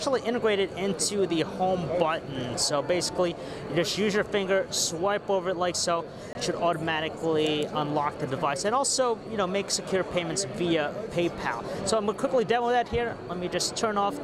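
At 6.33 to 6.35 s the audio drops out for 20 ms, heard as a brief tick-like hole: a block of digital silence, where samples were replaced by zeros with no fade, as happens when an output buffer isn't filled in time.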